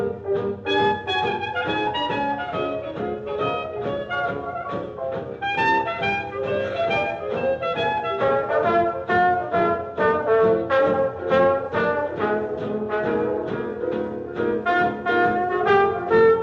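Nothing technically wrong turns up anywhere in this audio, so there's no fault to point to here.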